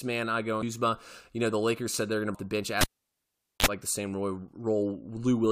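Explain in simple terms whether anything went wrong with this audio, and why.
Damaged data in a compressed stream shows up twice: a brief glitch at 0.62 s, just after "man I go", and another at 2.34 s, just before "the bench". Corrupted bytes made the decoder misread those frames and lose its place briefly.

A cable pulled and plugged in comes next, from 2.81 to 3.66 s, right after "the bench". A pop cuts the speech, then about 0.8 s of near silence, a short 50 Hz mains buzz of about 37 ms as the plug touched, and another pop as sound returned.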